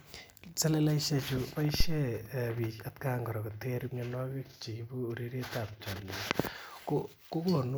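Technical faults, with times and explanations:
1.80–2.02 s, phantom power thump: a supply switching on the live input sends a step through the coupling capacitors, a deep thump at about -14 dBFS decaying in 49 ms, before "bik at".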